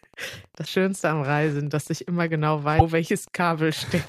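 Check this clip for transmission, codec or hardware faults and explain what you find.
Two faults are present: Wi-Fi interference across the whole clip, and two short glitches from a broken MP3 bit reservoir.

Wi-Fi interference runs from start to finish. A faint tick repeats every 102.4 ms, about ten times a second. It sits about 30 dB below the speech. A nearby Wi-Fi radio sends a beacon at that period. The audio circuit rectifies the radio bursts into the audio band. The result is a steady, mechanical ticking under the speech.

The speech glitches twice. The first is from 0.64 to 0.67 s. The second is from 2.78 to 2.82 s, right after "dass ich immer genau". Each lasts about 30 ms, close to one 26.1 ms MP3 frame. The speech seems to skip forward at each point. The likely cause is a broken MP3 bit reservoir. Frames were lost, so the next frame read its borrowed bits from the wrong data. 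It decoded briefly as garbage before the stream recovered.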